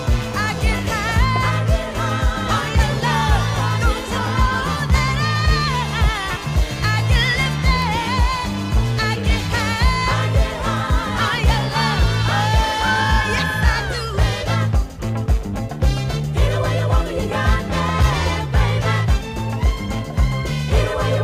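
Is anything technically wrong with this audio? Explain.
No, nothing stood out as technically wrong when listening to this audio.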